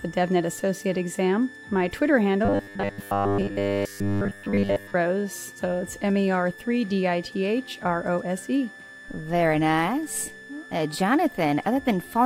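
A switching supply whistle runs through the whole clip, a thin high tone sitting between about 1.74 and 1.76 kHz, roughly 20 dB below the main sound. A switch-mode power supply in the chain is oscillating in its audible burst range or beating against another supply, and the slight spread of the tone shows its pitch wandering as the load on that supply shifts.

Robotic sound from repeated short buffers appears from 2.45 to 4.95 s, where the audio collapses into a rigid, metallic buzz pitched at 100 Hz that only loosely tracks the underlying sound. The likely cause is fresh audio arriving too seldom, so the playback software loops the most recent 10 ms chunk to fill the gaps. Those repeats impose the fixed 100 Hz pitch, while most of the real audio in that stretch is simply skipped.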